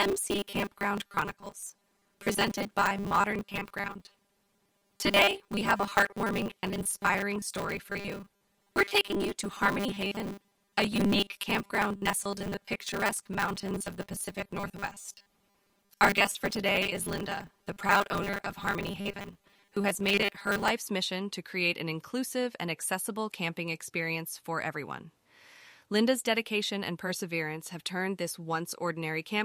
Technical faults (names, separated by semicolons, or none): robotic sound from repeated short buffers